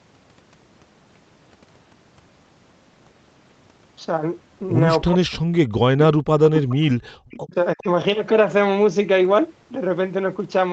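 Speech, with the echo canceller misbehaving in the middle of the call. The voice drops out in pieces at 5.05 to 5.33 s, 5.49 to 5.56 s, 7.41 to 7.56 s and 7.75 to 7.87 s. The deepest dips are about 40 dB, and the last is shallower, about 20 dB. This is speech suppressed in double talk. Both sides likely spoke at once, and the canceller cut this voice along with the echo. A delayed copy of the voice also comes back, trailing the original by 364 ms. It appears at 5.98 to 6.04 s, 6.44 to 6.76 s and 7.29 to 7.40 s. It is loudest in the middle stretch, only about 5 dB under the speech. This is likely echo leak, where the far end's loudspeaker output was not fully removed and was sent back. Between 7.01 and 7.13 s the room sound briefly falls away, by about 33 dB, then returns. That is background gated by the echo canceller, which clamped the microphone while the loudspeaker played. Throughout, the audio stops at 8 kHz, as expected from the call path.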